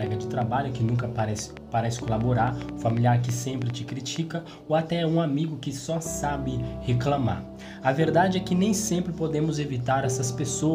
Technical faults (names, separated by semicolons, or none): train of clicks